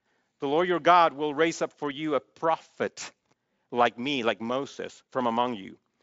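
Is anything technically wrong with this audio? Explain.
No, nothing is technically wrong.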